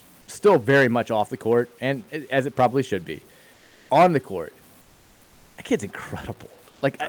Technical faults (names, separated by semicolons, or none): low bit depth without dither; comfort noise in place of the background